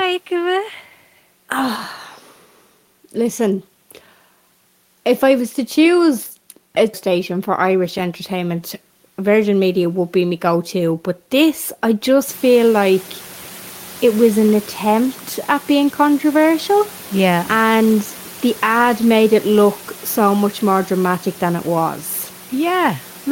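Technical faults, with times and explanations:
No technical faults can be heard in this speech clip. The room's background noise steps up by about 20 dB at around 12.5 s but stays about 23 dB below the speech, and it belongs to the recording space rather than the system.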